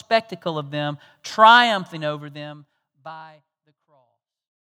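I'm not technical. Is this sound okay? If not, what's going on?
Yes, no faults found, and the gentle fade-out from around 2 seconds to the end is a deliberate smooth fade, not a problem.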